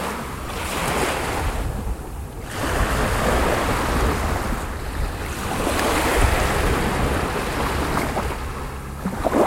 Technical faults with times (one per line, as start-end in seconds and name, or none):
0.46 lost LE Audio frames